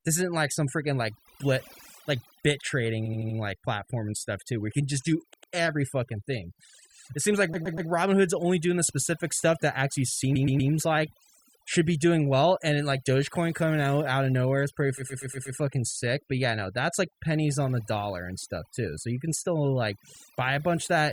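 Right from the start, the whole clip has overdone noise removal. The denoiser was set far too hard, so any frequency band sitting near its noise estimate gets pushed down or shut off entirely, and the quieter parts of the speech get swallowed along with the noise. The background drops and breaks up into little twinkly specks.

On top of that there are five spots of repeated frames, where a short chunk of coded audio got played again and again so you hear a stutter. At 3.05 to 3.37 s, just after "blit like bit trading" and before "like platform and stuff", an 80 ms slice loops four extra times. At 5.33 to 5.53 s, between "can just do" and "every fucking thing", a 100 ms bit plays twice more. Then at 7.53 to 7.89 s a 120 ms block repeats three times, and again at 10.35 to 10.71 s, between "specific stuff that actually" and "like should be doing". The worst is 14.97 to 15.57 s, where a 120 ms block comes round five extra times. 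Together they stretch the clip by nearly two seconds.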